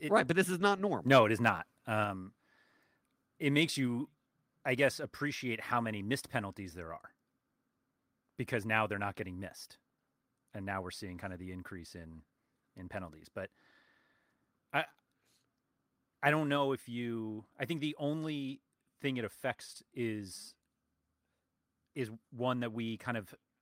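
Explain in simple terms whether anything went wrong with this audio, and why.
Two things go wrong early in this speech recording. Just after "this is not normal", from 1.13 to 1.19 s, there is microphone overload: the loudest moment gets a short, harsh crackle because its peaks are flattened at the top. The microphone's input volume was likely set too high. This is a brief rough edge, not a change in overall loudness.

Then at 2.04 s, right after "it is not", the microphone volume steps down: the voice and the background both drop to a quieter level all at once and stay there. Most likely the call software reacted to the earlier overload by turning the input down. Unlike the overload, this adds no crackle or harshness, and it is a single sudden step rather than a gradual fade.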